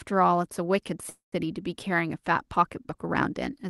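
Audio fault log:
1.09 to 1.34 s, call audio freeze: the last sound is drawn out into a buzzy, fading tail that thins into roughly 130 ms of silence. The sound then resumes exactly where it broke off, with nothing lost but everything after it arriving about 230 ms late. This is likely a jitter buffer running empty when packets stalled in transit on the Opus call path, whose 12 kHz upper limit applies throughout.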